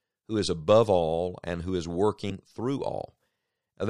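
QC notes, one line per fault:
2.29–2.32 s, broken MP3 bit reservoir: a brief glitch lasting about a frame's worth of speech, and the audio jumps ahead. Likely a frame got dropped, so the next one reached back for borrowed bits and decoded someone else's bytes.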